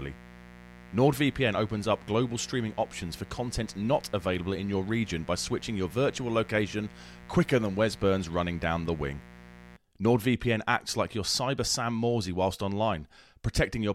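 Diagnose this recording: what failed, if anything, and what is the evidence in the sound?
Analogue wiring failed: mains buzz, a raspy 60 Hz buzz with harmonics into the kilohertz range, runs from 0.0 to 9.77 s, roughly 20 dB below the speech, from switching spikes through a dimmer, rectifier or missing shield.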